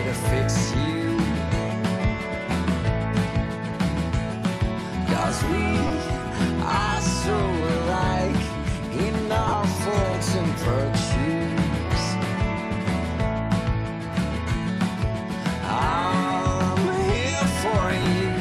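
A brief noisy smear replaces the sound at 5.87–5.90 s, in broken bursts across 9.48–9.54 s, and at 18.03–18.05 s. These are lost LE Audio frames: the LC3 decoder filled each 22.5–45 ms of lost audio by repeating the last spectrum with scrambled signs.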